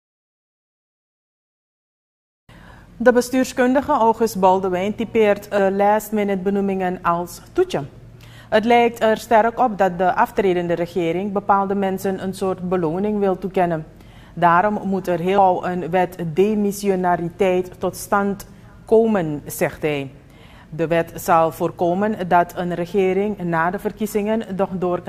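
The audio jumps forward abruptly at 5.58 s and again at 15.38 s, each time losing about a fifth of a second. This is audio missing between chunks, likely from a recorder or processor that works in 10-second blocks and drops a short piece while closing one block and opening the next. Unlike a dropout, no silent gap is left; the two sides butt together. The regular spacing of about 9.8 s also separates these skips from random network glitches.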